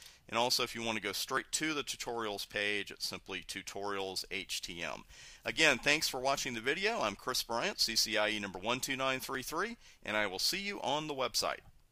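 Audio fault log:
1.37 s and 9.35 s: overlap between stream segments. Tiny skips where 9 ms and 16 ms of sound vanish, because overlapping time stamps, consistent with 4-second segments, made the player cut audio that was not really doubled.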